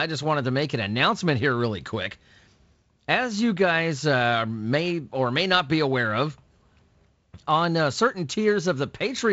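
Nothing goes wrong anywhere in this speech, which comes through as wideband telephone audio with nothing above about 7.7 kHz, the sort of band limit and light coding you'd expect from G.722 at what sounds like 48 kbit/s.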